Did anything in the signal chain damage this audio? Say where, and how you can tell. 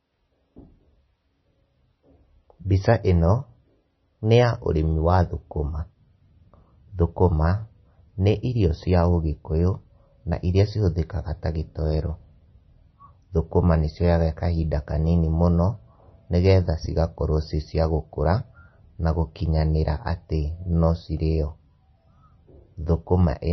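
Yes. Throughout the speech, nothing sounds above about 5.9 kHz, and the sound is watery and swirly, with smeared attacks. The stage is the codec, likely MP3 compression at a very low bitrate. Starved of bits, the encoder cut the treble and dropped weak frequency lines frame by frame.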